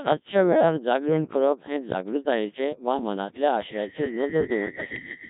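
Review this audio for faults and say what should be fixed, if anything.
Codec 2 vocoder damage runs through the whole speech clip: the voice is resynthesised from pitch, voicing and spectral envelope at roughly 1.3 kbit/s, hence the heavy robotic buzz.

Loudspeaker feedback squeal starts at 3.73 s and continues to the end, a 1.8 kHz tone swelling over about a second and a half to roughly 10 dB above the speech as the mic-speaker loop exceeds unity gain.

To prevent both, capture and archive speech with a waveform codec at a higher bitrate, and reduce loop gain by moving the microphone away from the loudspeaker or notching 1.8 kHz.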